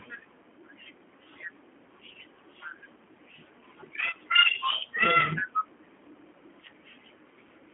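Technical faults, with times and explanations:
Throughout, G.729 codec: the speech sits in a narrow 250 Hz to 3.5 kHz band with nothing above 3.6 kHz, and is plainly rough and synthetic, which fits an 8 kbit/s coder rebuilding the speech from a filter, pitch and sparse pulses rather than simply band-limiting it.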